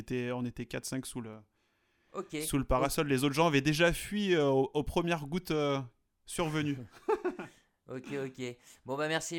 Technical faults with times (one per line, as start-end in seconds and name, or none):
1.33 block of digital silence